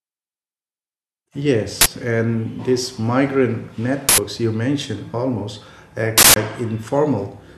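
Three bursts of uninitialised buffer hit this speech clip. They sit at 1.81 to 1.86 s, just before "and these migrant", at 4.09 to 4.18 s, between "and these migrant" and "you mentioned almost", and at 6.18 to 6.36 s, after "you mentioned almost". Each time a block went out before any audio was written to it, so leftover memory played as loud digital noise. The lengths of 46, 93 and 186 ms fit blocks of 2048, 4096 and 8192 samples.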